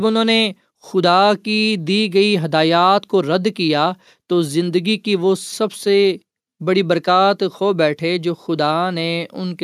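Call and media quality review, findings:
No audible defects identified on the speech path; nothing to action.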